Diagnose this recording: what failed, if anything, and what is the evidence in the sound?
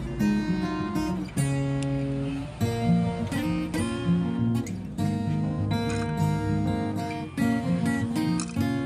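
Nothing stood out on listening that would point to a failure at any stage of the chain.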